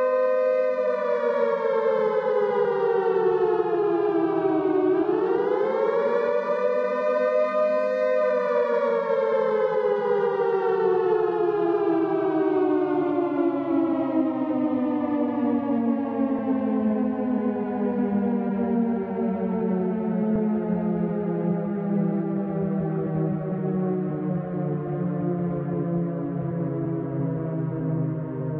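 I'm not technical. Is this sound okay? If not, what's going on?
No. Compressed frames were skipped: small chunks of the file were lost or rejected during playback, so the sound briefly smears and jumps ahead at 2.64, 13.93, 16.38, 20.35 and 23.51 seconds.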